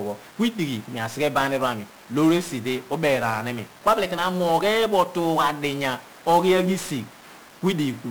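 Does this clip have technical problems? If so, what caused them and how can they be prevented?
Yes. The speech has heavy 1-bit DFPWM compression throughout. Each sample becomes one up-or-down nudge to an adaptive level, so strong broadband quantisation noise turns everything fuzzy and crackly and buries the treble in hiss. This fits a 48 kbps DFPWM stream. Prevent it by encoding with a multi-bit codec instead.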